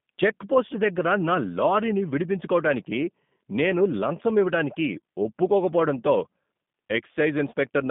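G.729 codec coding runs through the whole of this speech clip, from start to finish. The speech has been rebuilt from a vocal tract filter, a pitch predictor and a few pulses per frame, and it sounds plainly rough and synthetic, which fits the 8 kbit/s G.729A variant. The line band spans roughly 150 Hz to 3.6 kHz, and nothing survives above 3.7 kHz, so the top of the spectrum is simply gone.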